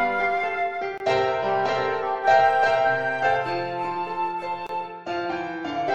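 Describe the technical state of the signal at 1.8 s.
At 1.8 s the signal is intact, with no dropout, distortion or other technical fault audible at that point.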